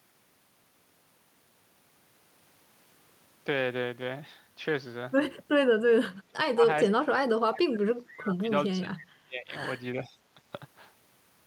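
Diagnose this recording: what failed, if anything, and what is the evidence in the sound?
The speech gets pushed down in chunks at 6.18–6.62, 6.88–7.15, 7.43–8.49, 8.78–9.53 and 9.95–10.18 s, by about 30 dB at worst. It's likely speech suppressed in double talk: the call-processing echo canceller couldn't separate the talker from far-end echo, so it ducked both.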